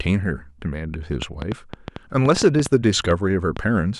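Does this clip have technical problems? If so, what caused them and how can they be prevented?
Yes. A train of clicks runs from 1.22 to 3.58 s, about fifteen irregular pops at 5.1 per second, likely from interference or a faulty connection or power supply. Shield cables and check the interface connection.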